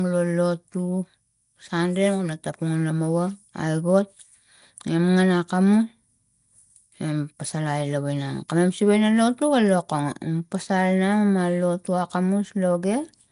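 From start to finish the speech carries a rough, hissy halo and a smeared, underwater quality, and nothing is heard above about 10.6 kHz. The damage is plainly audible and is most likely Nellymoser compression, the Flash-era microphone codec. It spends a fixed two bits per sample on short blocks, so quieter bands get no bits and are replaced with noise. The overall coarseness fits a rate around 44 kbps.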